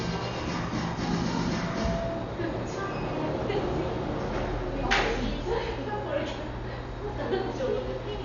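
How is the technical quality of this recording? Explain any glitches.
The technical quality is poor, with heavy codec damage throughout and one feedback event.

Throughout, there is nothing above 6.9 kHz, so the sound is dull. Tonal parts carry a rough, fluttering noise. This is likely Dolby Digital compression at a low bitrate, around 48 kbps. The encoder narrowed the band and left many frequency lines without mantissa bits, and the decoder filled them with noise. That noise fill around tones, rather than the swirly, watery artefacts of MP3-style coding, points to AC-3.

From 1.42 to 2.59 s, a loudspeaker feedback squeal appears at 668 Hz. A microphone picked up the loudspeaker it was feeding, and at that frequency the loop gain went above one. The tone swells over roughly half a second until it is about as loud as the surrounding sound, then stops. The gradual build-up at a single frequency sets it apart from a test tone or mains hum, which would start at full strength.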